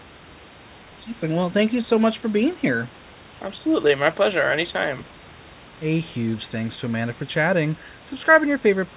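No technical faults can be heard anywhere in this speech recording.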